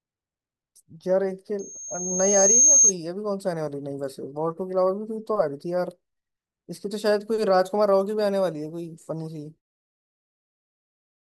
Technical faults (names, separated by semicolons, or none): loudspeaker feedback squeal